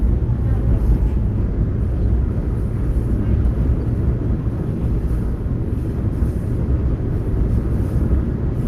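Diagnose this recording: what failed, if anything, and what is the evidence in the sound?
Nothing failed, and nothing in the sound points to a problem at any stage of the recording.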